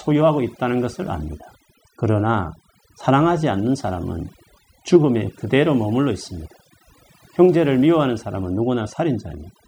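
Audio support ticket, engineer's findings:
Overdone noise removal, throughout. Background gated to near silence with twinkling, chirpy specks. Probable component: noise reduction stage set far too aggressive. Bins near the noise estimate pulled down or off, taking quiet speech detail with them. Spectrogram: dark floor dotted with isolated bright specks, ragged holes in speech harmonics. Waveform: unnaturally flat gaps between phrases.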